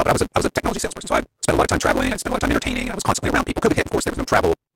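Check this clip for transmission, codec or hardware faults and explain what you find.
There is one fault, a block size mismatch (truncated), and it runs through the whole speech clip. A steady buzz at 172 Hz sits under everything, and the speech plays about 1.88 times too fast while keeping its timbre. One stage delivers longer blocks than the next stage accepts, so the tail of every block is dropped. The repeated cut at the block boundary produces the buzz, which fits a 256-sample read size. The missing tails shorten the timeline by the ratio of the two block sizes.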